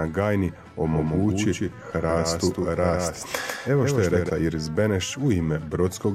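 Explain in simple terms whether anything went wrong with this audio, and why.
From 0.92 to 4.30 s the sound has a quick, slightly quieter echo trailing about 150 ms behind it, which then stops abruptly. This is a doubled audio track, likely because the same audio was picked up a second time through a slower path and mixed back in.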